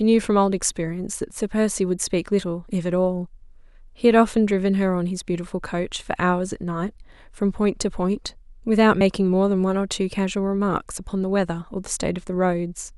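At 9.01 s the speech jumps forward by about a single frame, some 30 ms, a case of compressed frames skipped: the decoder never rendered that frame, which fits a 32 ms frame size.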